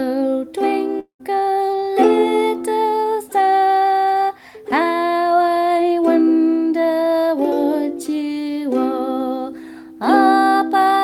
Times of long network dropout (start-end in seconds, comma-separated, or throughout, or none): 0.99-1.21